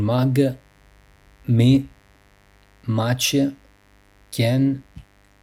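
A steady, raspy mains buzz sits well below the speech for the whole recording, built from 50 Hz harmonics that sharp switching spikes from a dimmer, rectifier or unshielded cable push into the kilohertz range.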